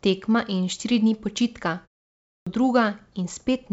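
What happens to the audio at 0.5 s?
Nothing goes wrong at 0.5 s: the speech there passes through intact, with no dropout, glitch or distortion.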